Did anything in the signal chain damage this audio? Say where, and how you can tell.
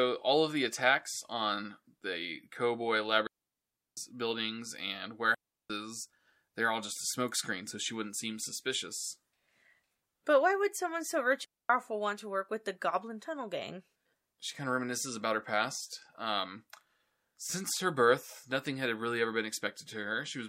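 Yes: digital wireless dropouts at 3.27–3.97, 5.34–5.70 and 11.45–11.70 s. The radio link lost data and the receiver muted, leaving flat waveform gaps and blank spectrogram columns with no noise bursts.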